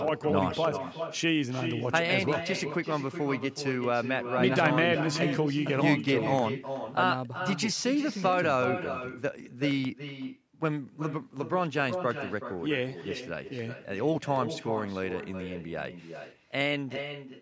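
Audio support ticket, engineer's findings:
Echo with no canceller, throughout the speech: a quieter copy about 8 dB down trails each phrase by roughly 0.4 s. The delay is distinct, unlike room reverb's smear, so far-end loudspeaker pickup is not being cancelled.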